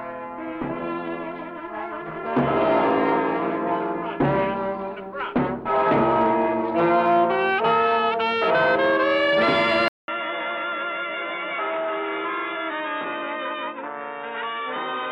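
At 9.88 s the sound cuts out for 200 ms, then returns duller, narrower (nothing above 3.8 kHz), roughly 10 dB quieter and over a new noise floor. The gap plus simultaneous tone, level and noise changes point to a likely input switched to a poorer device, not filtering.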